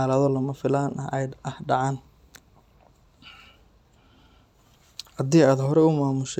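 No technical faults can be heard in the speech recording at any point.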